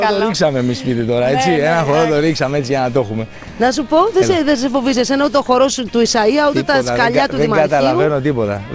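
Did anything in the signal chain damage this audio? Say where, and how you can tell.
No, nothing in the signal chain damaged this audio; the absence of content above 8 kHz is simply the normal band limit of the wideband call path it passed through.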